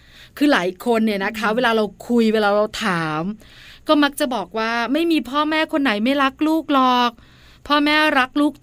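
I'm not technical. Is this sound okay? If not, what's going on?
Yes, no faults detected in this speech recording.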